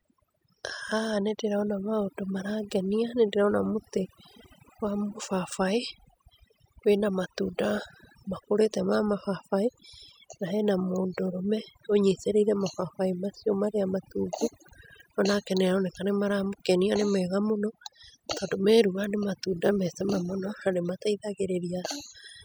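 From start to finish the speech carries overdone noise removal: the denoiser was pushed so hard that it mutes any frequency band sitting near its noise estimate, softer voice detail included. Pauses fall to near silence with little twinkling specks.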